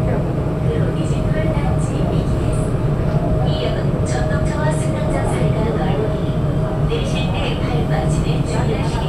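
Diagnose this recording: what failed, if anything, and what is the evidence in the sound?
Nothing stood out on listening to this recording that would point to a failure at any stage of the chain.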